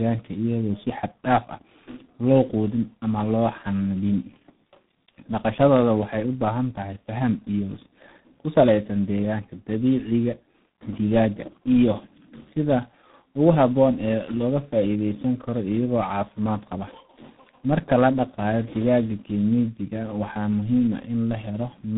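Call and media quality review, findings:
Tandem speech coding, throughout: rough, muffled, warbly speech; sound points to a low-rate coder such as G.723.1 re-encoded via G.711 into G.726 ADPCM, each stage compounding earlier artefacts. Spectrogram: flat ceiling near 3.8 kHz, smeared, wobbling harmonics.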